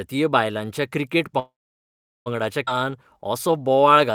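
At 1.39 s the speech stalls, and it doesn't pick up again until 2.28 s. That's a call audio freeze: a short fading buzz continues the last sound, then about 0.76 s is just silence. Most likely the packets got held up in transit and the jitter buffer ran dry, leaving the receiver nothing to play. When they arrived, playback carried on from the exact point it stopped, so nothing's lost. The speech is simply pushed back by about 0.87 s.

Right after that, between 2.66 and 2.69 s, there's a skip ahead. Playback jumps forward with only a tiny 9 ms join, and something like half a second of speech is gone. It's the flip side of the freeze: later audio was already waiting, a chunk was dropped, and the two sides got stitched together almost directly, so it lurches rather than pausing.

From 2.77 s to 4.13 s you get a jitter buffer slow-down. The receiver was rebuilding its reserve by repeating single pitch periods and little slices of pauses, adding 141 ms in total. 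The speech plays at about 90% speed with the pitch unchanged, so sounds come out drawn out and a bit stretched.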